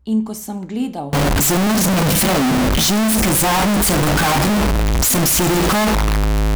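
From 1.13 s, right after "ko sem gledal", to the end of the clip, the speech jumps to a very loud, harsh, nearly square waveform sitting at an almost fixed, high level, with background noise raised to the level of the speech itself. Pitch still comes through. This is float read as integer: 32-bit float samples likely being read as 32-bit integers, so sign and exponent bits dictate the level.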